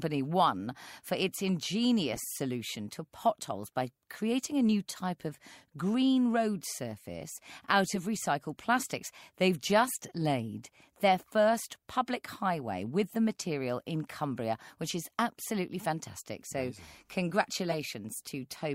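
At 2.12 to 2.18 s, just before "solution to potholes by", a corrupt frame decoded gives a brief chirp. Damaged compressed data put energy at wrong frequencies for a few frames. A louder blip follows at 17.70 to 17.74 s, peaking around -20 dBFS.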